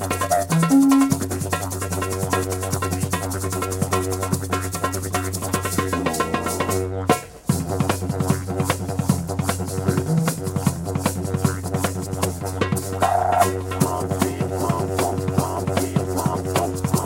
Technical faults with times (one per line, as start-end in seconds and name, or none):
none